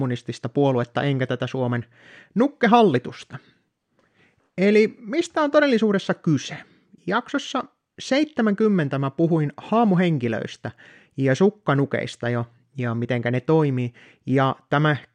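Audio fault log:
Nothing to flag here; the speech comes across without any audible technical trouble.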